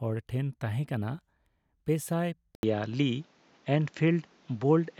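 At 2.55 s the recording likely switches its input to a poorer device, and the speech stays on that narrower path until the end. An 80 ms gap of silence marks the changeover. After it, nothing is left above 7.6 kHz, so the voice loses its air and turns dull and boxy. The level shifts by a few decibels, and a new background noise floor appears, sitting roughly 35 dB under the speech.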